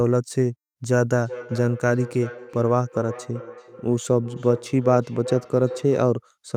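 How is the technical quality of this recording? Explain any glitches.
The recording has a feedback echo between two devices running from 1.2 s to 6.27 s. From that point each bit of speech comes back at a steady interval of roughly 0.4 s, peaking at about 13 dB below the speech. What's happening is that two devices in the same room are on the call: one plays out what the other's mic sent, and that mic hears it again. Each device's echo canceller only removes its own playback, so the loop goes uncorrected.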